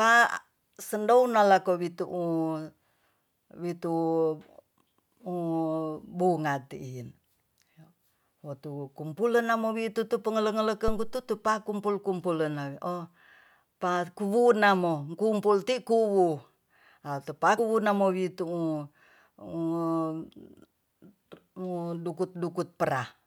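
At 10.88 s a supply switching on or off at the live input pushed a step through the coupling capacitors: a phantom power thump, a deep thud decaying within 87 ms and gone by 11.27 s. From 17.57 to 17.60 s, frames were likely cut from an MP3 stream, giving a broken MP3 bit reservoir: the next frame read another frame's bytes, so the sound jumps ahead through a 30 ms disturbance.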